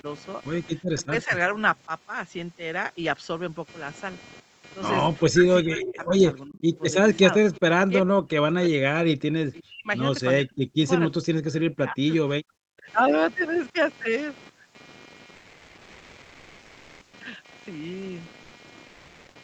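Computer activity noise runs through the whole recording: a buzzy, pulsing hum at roughly 200 pulses per second, about 20 dB below the speech. It is likely caused by processor or peripheral load disturbing the audio circuit's shared ground, so it follows the machine's activity rather than the talker.

Speech suppressed in double talk first touches the opening, 0.01 to 0.05 s, as a slight dip of a few decibels. From 5.3 to 12.86 s it returns far more heavily. Over roughly four seconds the voice sinks, at worst by around 40 dB, almost to silence. The likely cause is an echo canceller that, with both sides talking, could not separate this talker from the loudspeaker echo and attenuated both.

Echo leak appears at 6.05 to 6.79 s and again briefly at 7.55 to 7.6 s. A faint delayed copy of the voice trails the original by 359 ms, about 25 dB down. It is likely the far end's loudspeaker sound reaching its microphone and slipping past its echo canceller.

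Comfort noise in place of the background covers 15.35 to 17.13 s and 18.43 to 18.51 s. The real room tone gives way to a smooth, featureless hiss at about the same level. This is likely Opus discontinuous transmission pausing the stream while the receiver synthesises filler noise.

Sound dropped by the voice detector occurs from 18.87 to 19.35 s. About 190 ms of genuine sound vanishes into that same steady noise. The encoder's voice detector likely mistook the sound for background and stopped sending, all within the 8 kHz bandwidth of the Opus call path.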